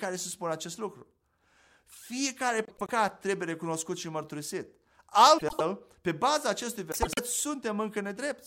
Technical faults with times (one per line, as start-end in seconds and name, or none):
2.65-2.90 frames out of order
5.38-5.61 frames out of order
6.92-7.19 frames out of order